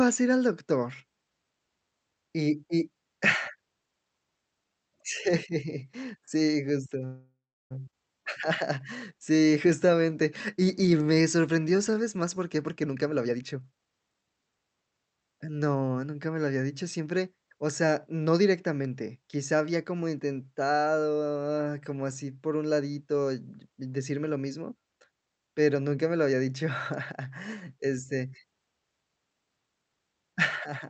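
Speech carried over a call path whose Opus-style coding trims the top end at about 8 kHz. At 7.05 to 7.73 s, right after "sí justo", a call audio freeze inserts about 0.65 s. The last sound is stretched into a fading buzz or hiss that ends in roughly 0.34 s of silence before the speech resumes where it stopped, with nothing lost. The likely cause is packets held up in transit until the jitter buffer ran dry. At 7.91 to 7.94 s a skip ahead follows: around half a second of speech is dropped and the two sides are spliced almost directly. From 8.23 to 12.36 s a jitter buffer slow-down plays the speech at 92% speed with unchanged pitch. It adds 330 ms by repeating single pitch periods and pause fragments, which draws out sounds. Then from 12.55 to 14.66 s a jitter buffer speed-up runs at 124% speed, again at the same pitch. Roughly half a second of short pitch-period pieces is cut to pull the delay back down, leaving the speech audibly hurried.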